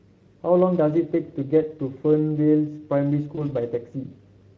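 Speex codec damage runs from start to finish and is plainly audible. The speech has a grainy, hoarse quality, because this CELP coder has limited bits for the excitation signal that drives its vocal-tract filter. Detail that the excitation cannot represent comes out as noise riding on the speech. The Speex bitrate is about 17 kbps.

VoIP packet loss concealed by the speech codec occurs from 3.35 to 3.41 s. About 20 ms of audio went missing, which fits a single lost frame. The decoder covered the hole by extending its last pitch and filter state at falling gain, and that guess carries into the following frames. The result is a brief stretched, fading sound and a short weak or distorted tail before the sound recovers.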